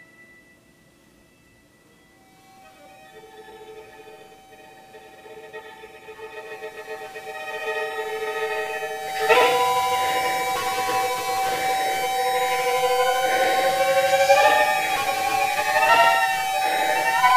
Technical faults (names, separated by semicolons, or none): doubled audio track